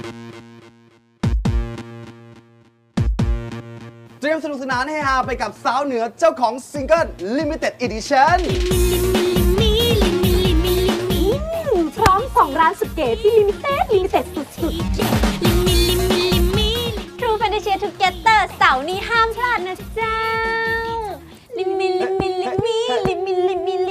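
No technical faults can be heard anywhere in the clip. Nothing in the audio points to a dropout, glitch or other transmission or processing problem.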